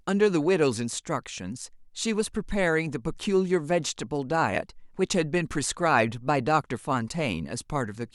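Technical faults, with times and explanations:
No technical faults are present in this speech recording.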